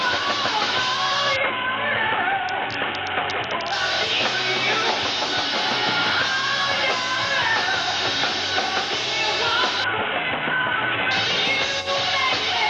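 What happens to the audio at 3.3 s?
At 3.3 s the audio is inside a Bluetooth SBC bit pool drop that runs from 1.36 s to 3.72 s. The link has been starved of bits, so the highest sub-bands are dropped and the remaining ones are coarsely quantised. The treble goes dull and a gritty noise rises, which fits a bit pool cut from 28 to 5, near 54 kbps. Unlike a plain low-pass filter, the grit comes with the dulling, and the full treble returns at 3.72 s.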